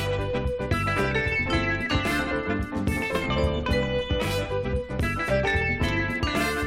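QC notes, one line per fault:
Nothing stood out on listening.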